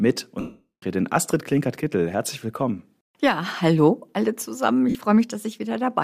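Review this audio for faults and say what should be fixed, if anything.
Two dropouts from lost LE Audio frames stand out. From 0.40 to 0.83 s the LC3 decoder fills the gap by repeating the last spectrum with scrambled phases, so the sound smears into noise and then fades toward silence as the concealment gives up. A short one at 4.90 to 4.95 s just blurs briefly. The lengths fit 7.5 ms frames. The light codec texture underneath is normal. Fix: improve the Bluetooth link margin or reduce RF interference.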